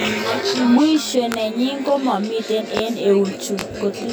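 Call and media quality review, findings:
Channel delay (comb filtering), throughout: one channel lags the other by around 20 ms before the mono sum, so notches fall at evenly spaced frequencies from around 30 Hz upward. Speech sounds rough or slightly doubled.

Loud pops at 1.32–1.34 s (just before "nenyin komami"), 2.77–2.79 s (just after "nenyin komami") and 3.59–3.61 s: likely voltage steps from a switch, plug or static. Each is a single sharp pop around 20 dB above the speech, which continues underneath.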